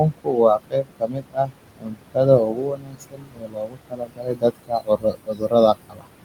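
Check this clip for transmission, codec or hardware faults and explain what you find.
Two faults come from an over-aggressive noise suppressor: processing artifacts throughout the clip, and speech cut by the suppressor in four stretches. The room noise, sitting about 12 dB below the speech, is part of the recording.

Noise suppressor artifacts run from start to finish. The background pumps down in pauses and swells back under the talking. The suppressor estimates the steady room noise and attenuates matching frequency bands frame by frame, by as much as about 22 dB here. Because that gain changes every frame, the leftover noise shifts unevenly.

Speech cut by the noise suppressor occurs at 0.03 to 1.53 s, 1.79 to 1.98 s, 2.44 to 5.54 s and 5.74 to 6.07 s. Within these spans, soft consonants, word endings and quieter syllables drop away and sound swallowed. The affected portions add up to roughly a second in the first span, a fifth of a second in the second, about two seconds in the third and a fifth of a second in the last. 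With the noise only about 12 dB down, faint speech looked like noise to the suppressor and was pulled down with it, by about 22 dB in the first three spans and about 19 dB in the last.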